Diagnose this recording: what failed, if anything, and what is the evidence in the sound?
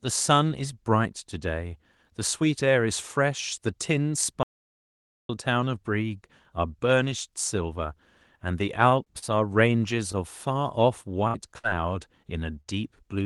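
The big one is an audio dropout to silence from 4.43 to 5.29 s, roughly 0.86 s of pure silence with no room tone underneath. The speech just stops and picks up again mid-flow, so whatever was said in that stretch is gone. That points upstream of the codec, at the capture or input stage, most likely a momentary disconnect or mute, with the encoder carrying on writing silence.

Then there's a cluster of short stalls from a late packet at 8.89, 9.04 and 9.18 s, plus one more at 12.60 s. Each time a sound gets held a touch too long, about 24, 27, 38 and 55 ms, with a faint buzzy smear. Nothing is actually missing. The jitter buffer ran dry, the receiver stretched the last bit of audio, and then it carried on from where it left off once the packet showed up. That's network jitter.

Two bursts of packet loss follow at 11.27 and 11.58 s. At each one the receiver keeps the last sound going for around 50 to 60 ms and fades it down into a held buzz or hiss, then jumps ahead. 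About 60 ms of real audio is skipped each time. This is also network-side: packets lost or too late to use, covered by concealment. The call path's roughly 12 kHz top end is there throughout.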